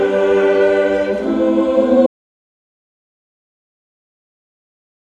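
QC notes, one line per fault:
2.06 s to the end: audio dropout to silence. The sound stops abruptly mid-flow and the rest of the clip is silent, with no room tone or noise floor left. That points to the input itself being lost, likely a disconnected device, failed link or stray mute, while recording carried on writing silence. Unlike a fade-out, there is no gradual decay, and unlike a noise gate, nothing returns when sound would resume.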